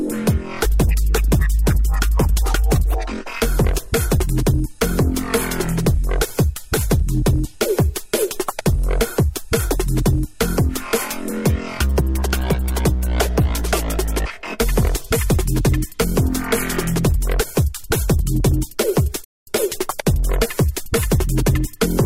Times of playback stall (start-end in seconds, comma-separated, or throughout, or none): 19.24-19.47